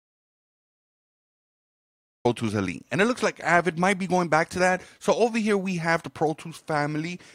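From the very start to 2.25 s the clip sits in an audio dropout to silence: pure silence with no room tone, the sound then arriving abruptly in mid-flow. The input was likely lost while the recorder kept writing silence.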